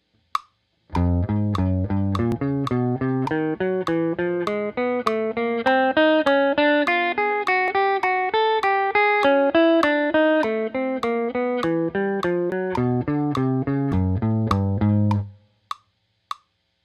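The audio jumps abruptly at 2.32, 7.68, 12.52 and 13.92 s. At each jump the sound skips ahead rather than pausing. That's the signature of a dropped buffer (overrun), likely from the capture side not reading samples before the hardware overwrote them. The missing stretches are short: something like 70 ms at 2.32 and 12.52 s, and around 40 ms at the other two points, with the two sides spliced straight together.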